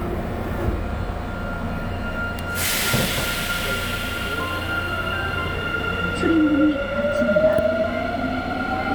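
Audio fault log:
No faults are heard in this recording of sounds. Nothing in the audio calls for an entry in the log.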